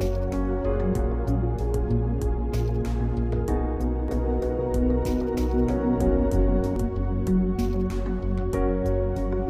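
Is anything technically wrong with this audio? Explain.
Yes. From 4.08 to 6.76 s there is a doubled audio track, likely from the signal being captured a second time through a slower path. A dry, full-band copy trails roughly a third of a second behind at about equal level, cutting in and out abruptly.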